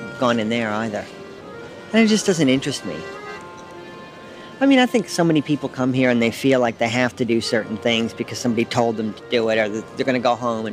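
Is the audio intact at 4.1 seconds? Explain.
Yes, at 4.1 seconds the audio plays through intact, with no dropout, click, distortion or other fault at that moment.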